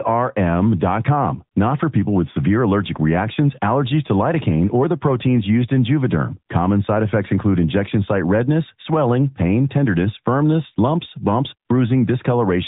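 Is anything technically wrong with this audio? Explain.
Yes. Throughout, the speech carries AMR narrowband mobile codec damage. Nothing passes above 3.8 kHz, and plainly audible buzzy, synthetic artefacts suggest a mid-rate mode near 10.2 kbps.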